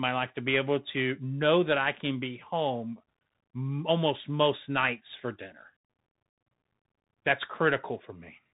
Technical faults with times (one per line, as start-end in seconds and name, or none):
0.00-8.53 Bluetooth CVSD headset codec